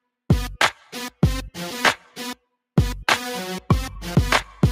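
At 1.86 s a brief noisy smear replaces the sound for about 10 ms. This is a lost LE Audio frame, consistent with a single dropped frame, concealed by the LC3 decoder with randomly signed repeated spectrum.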